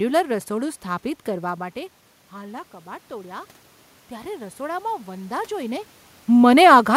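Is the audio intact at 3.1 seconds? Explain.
No. At 3.1 seconds the automatic gain is rising, between 1.33 and 3.52 s. After the input fell by about 16 dB as the talker moved back near 1.5 s, the control slowly adds about 3 dB, so voice and room noise swell together rather than the voice alone changing.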